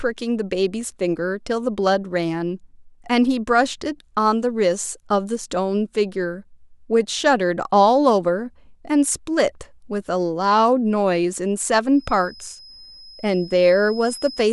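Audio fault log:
11.90 to 14.53 s, feedback whistle: a thin, steady tone at 5.1 kHz enters behind the speech and holds to the end of the clip, sitting roughly 20 dB under it and swelling and fading slowly in level. This is likely a loudspeaker-to-microphone loop running just at the edge of feedback, where one high frequency is reinforced enough to keep ringing but not enough to build into a howl.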